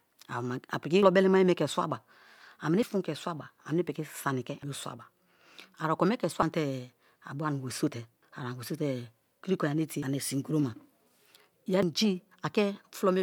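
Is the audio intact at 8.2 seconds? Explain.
No. At 8.23 s there is a skip where audio is missing between chunks: around a fifth of a second of speech drops out, and the sound on either side is butted together with no silence in between, so it jumps forward abruptly. The likely cause is a recorder or processor handling the signal in 2.0-second blocks and losing a short stretch at the handover from one block to the next.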